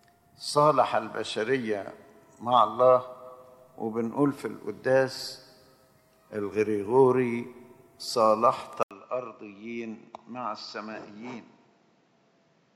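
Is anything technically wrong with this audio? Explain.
Yes. At 8.83 s the audio drops out for about 80 ms, then returns duller and boxier, roughly 10 dB quieter, with nothing above 7.6 kHz and a new background noise sitting around 35 dB below the signal. This continues to the end. The likely cause is an input switched to a poorer device: the recording jumped mid-take to a different microphone or headset path, whose narrower band, lower level and own noise floor replace the original capture.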